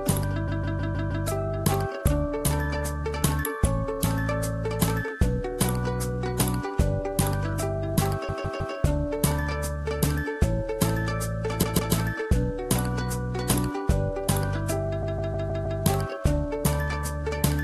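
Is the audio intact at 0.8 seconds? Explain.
No. Repeated frames run from 0.47 to 1.26 s: one 157 ms block of compressed audio is decoded again five more times, so the sound stutters and the clip gains about 0.78 s.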